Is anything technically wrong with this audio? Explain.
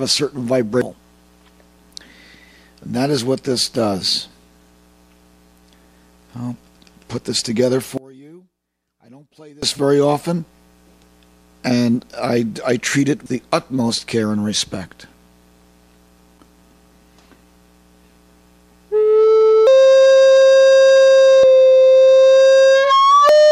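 Yes. There are two faults.

Compressed frames skipped occurs at 0.82, 13.26, 19.67, 21.43 and 23.29 s. The audio leaps ahead by roughly 0.7, 0.3, 0.5, 0.4 and 0.2 s, in steps that fit frames of about 93 ms.

From 7.98 to 9.63 s the level collapses by about 27 dB, leaving only a faint residue. That residue, rather than total silence, points to one channel inverted, likely, cancelling the shared content when summed to mono.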